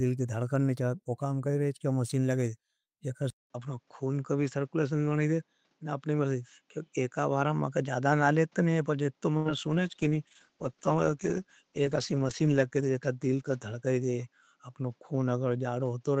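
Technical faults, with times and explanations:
3.30–16.2 s: input switched to a poorer device. After a 200 ms silence, the sound turns duller and boxier. Nothing remains above 7.6 kHz, and faint new background noise sits well below the signal. Level stays about the same, which likely points to a lower-grade microphone or headset call profile.
9.37–9.48 s: burst of packet loss. The receiver stretches the last received sound into an 84 ms fading fill, heard as a held buzz or hiss decaying away. Playback then resumes with about 80 ms of audio missing.
9.60–14.69 s: call bitrate drop. The encoder gets far fewer bits, consistent with a fall from around 48 kbps to 13 kbps, bottoming out for about 3.03 s. Coarser coding makes the sound rough and watery, and its coded band narrows from 20 kHz to 12 kHz.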